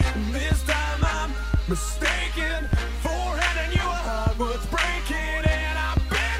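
No technical faults detected.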